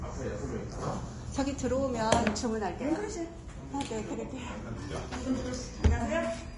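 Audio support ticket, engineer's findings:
Hissy, grainy treble across the whole clip, roughened tones, smeared attacks, nothing above 10.6 kHz. Likely Vorbis compression at a low bitrate, around 32 kbps: the encoder drops the top end and quantises the residue so coarsely that detail turns to noise.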